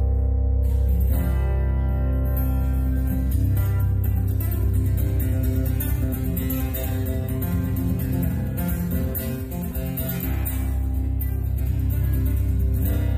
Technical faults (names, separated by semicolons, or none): compressed frames skipped